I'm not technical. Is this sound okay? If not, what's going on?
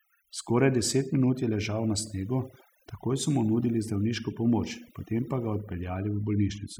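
No. Overdone noise removal, throughout: a cleanup tool set too strong muted the quieter parts of the voice along with the background noise, leaving twinkling near-silence behind.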